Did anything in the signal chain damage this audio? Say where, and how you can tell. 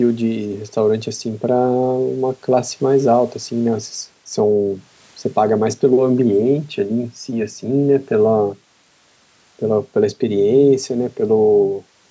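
No, nothing in the signal chain damaged this audio; the speech has simply passed through call microphone processing, which trims the lowest bass and leaves nothing above 8 kHz.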